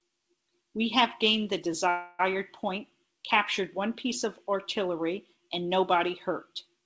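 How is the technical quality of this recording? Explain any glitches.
There's one real glitch, a call audio freeze, in speech that's come through a call codec with nothing above 8 kHz, which fits G.722. From 1.90 to 2.21 s the sound hangs as a fading buzzy smear for 290 ms, likely because packets were held up and the jitter buffer ran dry. Nothing's lost: the speech picks up where it stopped, just 290 ms late.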